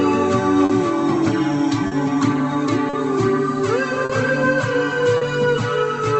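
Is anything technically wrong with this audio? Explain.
Yes, there are two timing faults in this music.

Clock drift between sender and receiver runs throughout. The sender's clock is about four percent slow, so the jitter buffer keeps draining. Small timing hiccups recur unevenly.

Short stalls from late packets occur at 0.65–0.71, 1.87–1.93, 2.89–2.95, 4.05–4.11 and 5.17–5.23 s. Each time the buffer ran empty. The last sound was held for about 40 ms, with nothing lost.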